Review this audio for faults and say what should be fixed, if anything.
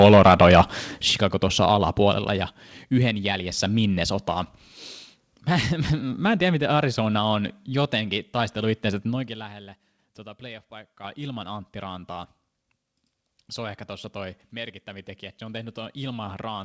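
Microphone overload, 0 to 0.61 s: the opening speech peaks run about 4 dB past the converter's limit, and around one sample in twenty has its top flattened, giving the loudest syllables a harsh, crackling edge. The likely cause is an input volume set too high. To prevent it, start the microphone gain lower so peaks stay a few decibels below full scale.

Microphone volume stepped down, at 1.02 s and 2.19 s: voice and background drop together in single steps, about 8 dB and then about 4 dB, just after the distorted opening. This is likely the call software's automatic gain control cutting the device's input volume after detecting clipping. With a correctly set starting gain, the software would have no reason to step the level down.

Microphone volume stepped up, at 9.99 s and 11.04 s: the level jumps by about 5 dB and then about 6 dB, with voice and background rising together, as the call software raises the device's input volume after judging the signal too quiet. 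Disabling automatic microphone gain adjustment, or fixing the gain once at a sensible level, prevents these jumps. The G.722 call path, with nothing above 8 kHz, needs no change.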